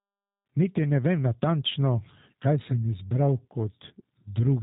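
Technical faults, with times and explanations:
Throughout, G.729 codec: the speech sounds band-limited and slightly rough, with a buzzy, synthetic edge, and the codec damage is plainly audible. Nothing remains above about 3.8 kHz, so sibilants and breathy detail are dulled. The sound points to G.729A at 8 kbit/s, where each 10 ms frame is rebuilt from a vocal tract filter, a pitch predictor and a handful of pulses rather than the original waveform, which gives the synthetic texture.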